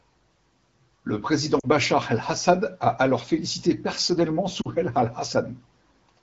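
At 1.59 to 1.66 s and again at 4.61 to 4.68 s, lost AMR speech frames: the decoder bridged each 40 ms gap by stretching the last good pitch and vocal tract shape at falling gain. The result is a brief fade to near silence, not a hard cut to silence.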